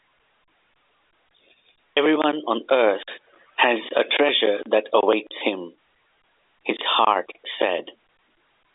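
No faults are audible in the speech, which carries the narrow 300 Hz to 3.6 kHz band of a G.711 telephone line, with nothing above about 3.8 kHz.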